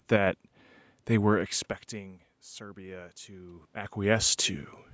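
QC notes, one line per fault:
1.91–4.23 s, automatic gain rising: after "they were" the input dropped by about 19 dB, so the automatic gain control slowly raised its gain by about 6 dB over 2.3 s, making the speech and the room noise swell together.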